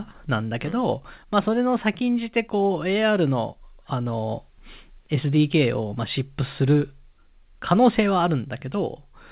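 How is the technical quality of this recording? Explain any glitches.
No glitches can be heard: the speech arrives intact over a call path, and its G.711 mu-law coding at 64 kbps keeps nothing above 4 kHz, which leaves the familiar narrowband telephone sound.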